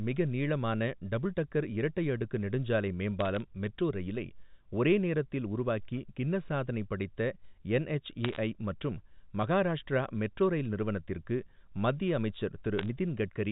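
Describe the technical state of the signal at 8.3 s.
At 8.3 s there are bit errors on a digital phone line, running from 8.25 to 8.38 s, just before "மற்றும் மகாராஷ்டிரா மெட்ரோ ரயில்". At an error rate of roughly 0.4 percent, flipped bits corrupt individual G.711 samples, and hits on sign or high-order bits produce sharp ticks that add up to a brief crackle. Unlike packet loss, the speech underneath carries on unbroken, with no gaps, repeats or smearing.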